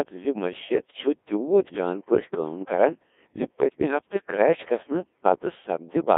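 Throughout, the speech runs through a Codec 2 vocoder. The damage is heavy and fits its 1.6 kbit/s mode: sine-wave resynthesis makes it robotic and buzzy. A spectrogram shows stiff, evenly spaced harmonics between 250 Hz and 3.6 kHz, and the waveform loses its natural shape.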